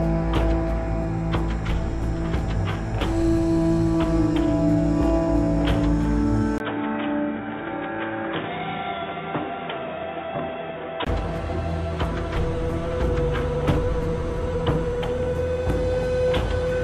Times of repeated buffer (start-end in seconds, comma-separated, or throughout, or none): none